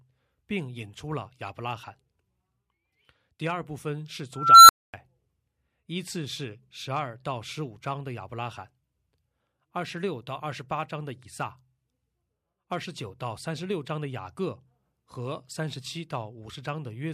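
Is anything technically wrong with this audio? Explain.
Yes. At 4.34 to 4.94 s an unstable filter makes a squeal near 1.5 kHz swell over about 0.35 s, overflow, then drop to 0.25 s of silence. Unlike acoustic feedback, it ends abruptly in silence.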